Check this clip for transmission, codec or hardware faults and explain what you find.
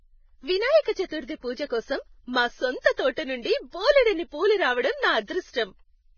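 One fault runs through the whole clip: heavy lossy coding damage, likely Vorbis compression. All the speech is bandlimited, with nothing above 6.5 kHz, and the remaining treble is hissy and grainy, with roughened tones and smeared consonant onsets. Coarse quantisation of the residue over the spectral floor replaces fine detail with noise, which fits a very low bitrate of around 16 kbps. On a spectrogram, the energy stops sharply at 6.5 kHz, and the upper bands show blotchy, noisy patches instead of clean harmonics.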